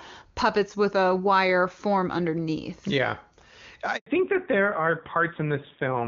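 At 3.96 s a handover gap cuts the speech for 100 ms, until 4.06 s, as the call switches networks and no frames arrive. The sound fades within tens of milliseconds to silence; the waveform shows a flat stretch and the spectrogram a blank vertical band.

From 4.06 s to the end, the call falls back to narrowband. The clear HD Voice sound before it, consistent with AMR-WB at a high rate, gives way to a duller, rougher tone that points to AMR-NB around 7.4 kbit/s. On a spectrogram, all energy above 4 kHz vanishes, leaving a sharp horizontal ceiling.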